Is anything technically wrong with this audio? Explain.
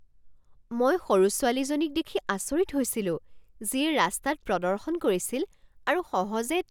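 Yes. From the start to 2.75 s the speech loses a little of its top-end air, a faint dulling of the highest treble. This is channel delay (comb filtering): one channel lags by about a single sample and, summed to mono, cancels near 20 kHz.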